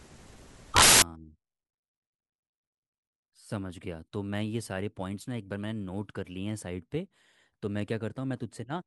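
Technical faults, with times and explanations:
0.00–1.02 s, samples built from the wrong bytes: the speech opens under a wall of loud, harsh broadband noise for its first second, before clean audio takes over. The player assembled each sample from misplaced bytes, whether shifted by one, reversed in order or misaligned, so the rapidly fluctuating low-order bits landed in the high-order position and dominated every value, turning the signal into broadband noise.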